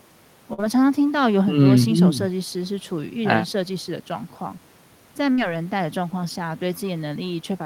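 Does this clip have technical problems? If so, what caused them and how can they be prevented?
Yes. At 0.53 to 0.60 s and 5.32 to 5.39 s the speech briefly freezes into a fading buzz or hiss, then jumps ahead. This is a burst of packet loss: consecutive packets were lost, the receiver stretched the last sound for about 45 ms and 55 ms, then skipped roughly 40 ms and 60 ms. Using a larger jitter buffer, forward error correction and a more stable network connection would prevent it.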